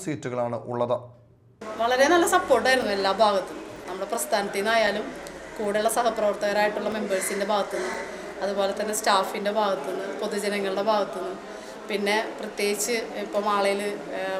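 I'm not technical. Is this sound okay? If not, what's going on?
No, it has two problems. First, periodic USB or driver dropouts: from 2.82 to 8.97 s, about seven tiny gaps of roughly 4 ms go silent, once every second, heard as regular ticks.

Second, a block of digital silence at 5.64 s: the sound cuts out for under a millisecond, so it comes across as a single tick.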